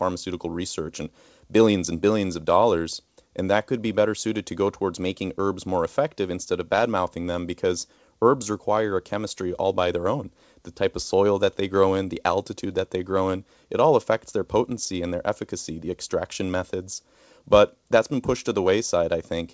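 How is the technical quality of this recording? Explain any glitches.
No glitches can be heard in this speech recording.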